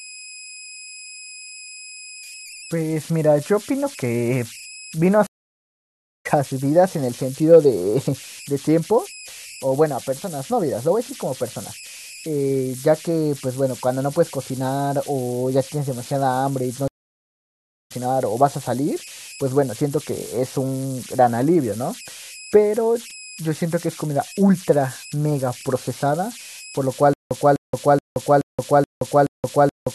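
Converter idle tones run through the whole speech clip. An undithered delta-sigma converter settles into repeating bit patterns on small input, producing a whistle around 3 kHz in pauses and grainy noise under quiet passages, with error about 18 dB below the signal.

A stream reconnect occurs at 5.27 to 6.26 s and again at 16.88 to 17.92 s. The connection dropped, leaving about 955 ms and 982 ms of silence. A fresh decoder then resumed mid-stream, skipping roughly half a second and 0.7 s of speech.

From 27.13 s to the end there is a stutter with silent gaps. A 252 ms fragment repeats six times, each followed by 174 ms of digital silence, on a 426 ms cycle. The likely cause is a stalled player replaying its last buffer at each retry, so the speech due in that span is lost.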